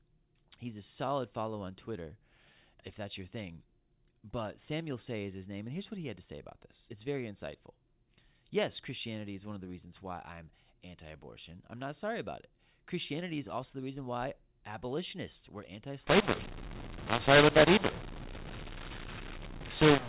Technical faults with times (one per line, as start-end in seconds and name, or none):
16.07-20.08 mu-law and A-law mixed up